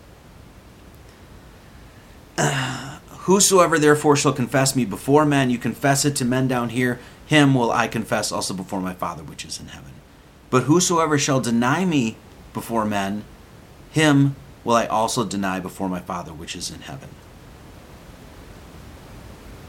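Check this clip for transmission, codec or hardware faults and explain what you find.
No transmission, codec or hardware faults turn up in this speech recording. Room noise can be heard sitting about 25 dB below the speech, and it belongs to the recording space rather than the system.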